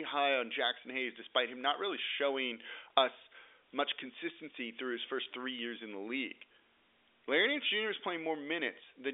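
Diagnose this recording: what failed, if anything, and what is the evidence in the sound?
Packet loss with pitch repetition at 5.25 s, a network-stage fault, between "much consistency through his" and "three years in the". The gap points to a single lost packet of about 10 ms, bridged by repeating the last pitch period, which sounds like a brief held, buzzy tone over the G.711 telephone band of 300 Hz to 3.6 kHz.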